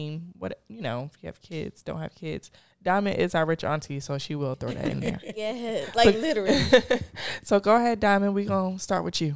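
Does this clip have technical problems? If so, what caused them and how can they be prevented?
No, there's nothing technically wrong to report here, so no cause or prevention applies.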